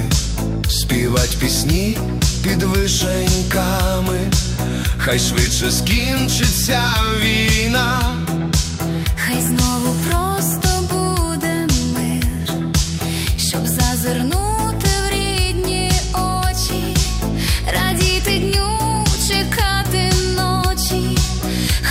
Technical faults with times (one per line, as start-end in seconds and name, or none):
none